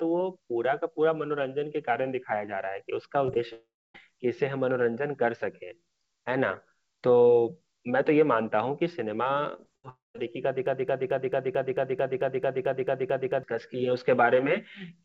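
At 3.26 to 3.30 s and again at 3.34 to 3.37 s the speech shows short concealed packet loss. Each time about 20 ms of audio failed to arrive, and the decoder patched the hole by extending the preceding sound before blending back in. Each patch is heard as a brief smear or wobble. On a spectrogram the harmonics run unnaturally flat for a few hundredths of a second. In the waveform a short stretch of extended sound blends back into the real audio at each rejoin.

From 3.53 to 3.96 s comes a long network dropout, where the audio likely stopped arriving for around 0.4 s. The last sound is stretched into a fading buzz or hiss, and then roughly 0.28 s of silence follows before speech resumes, with the lost portion gone. The waveform shows a decaying tail collapsing to a flat line. The spectrogram shows smeared, frozen energy fading to an empty band.

Between 9.56 and 10.20 s there is repeated packet loss (robotic sound). 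Four gaps, the longest 76 ms, leave about a fifth of that stretch synthesised. The result sounds choppy, with pieces missing. On a spectrogram, smooth formant movement is broken into blocky, repeated slices. Inside this stretch, from 9.89 to 10.16 s, a second long network dropout, likely from audio that stopped arriving, erases about 0.26 s, with roughly 0.17 s of near-silence visible as a flat gap in the waveform.

From 10.66 to 13.43 s a broken-record loop takes over. A 221 ms fragment repeats exactly, back to back, 13 times, likely because the stream stalled and kept resending its last buffer. It sounds like a stuck, stuttering repeat, and the speech due in those seconds never plays. The waveform shows an identical shape tiled at fixed spacing. The spectrogram shows vertical stripes repeating every 0.22 s.

Throughout the clip, the call path's G.722 coding at 64 kbps leaves nothing above 8 kHz. 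This shows as a hard empty ceiling across the spectrogram.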